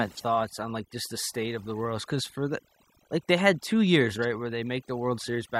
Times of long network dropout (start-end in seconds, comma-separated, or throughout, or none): none